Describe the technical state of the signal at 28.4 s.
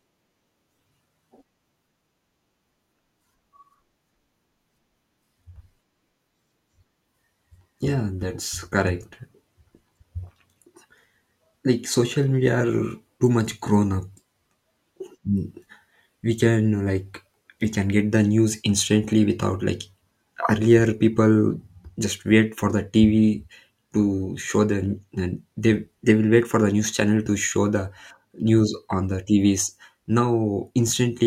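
At 28.4 s the speech signal is intact, with no audible fault at that moment.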